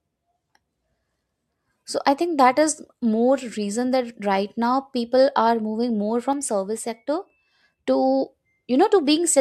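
A sudden gain jump runs from 6.33 to 7.88 s in this speech clip, starting right after "moving more". The level drops by about 4 dB in one step and the background noise falls with it, likely from a digital gain change applied without any ramp.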